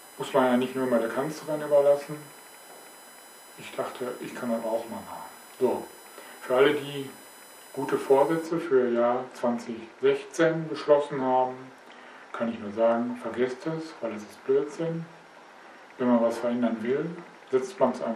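A thin, steady, fixed-pitch whine sits under the audio from the start to 8.46 s, then stops. It is built on 1 kHz, but its strongest component is the 10th harmonic at 10 kHz, which gives it a piercing, high edge, roughly 25 dB below the signal. This is USB whine: the 1 ms frame rhythm of USB bus activity pulls current in regular bursts, and that ripple leaks into the audio path through shared power or ground.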